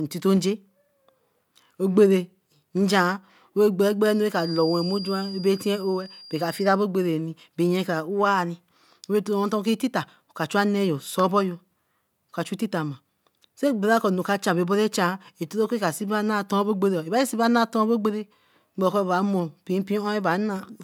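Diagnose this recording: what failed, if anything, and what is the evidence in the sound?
A feedback whistle sits under the speech from 4.28 to 6.76 s. It is a thin, steady tone at 4.8 kHz, well below the speech level. The likely cause is a loudspeaker-to-microphone loop held just at the edge of feedback, ringing without running away.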